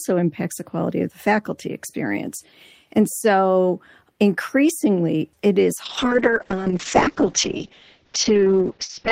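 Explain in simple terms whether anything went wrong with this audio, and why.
Call bitrate drop from 5.87 s, just after "so increasingly it is": the connection squeezed the audio, so speech turns rough and muffled, losing sound above 8 kHz, through the end.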